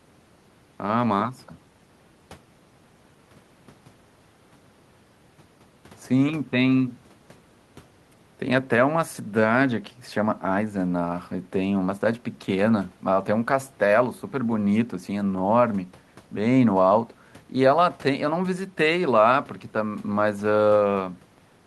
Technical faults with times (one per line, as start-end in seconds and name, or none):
none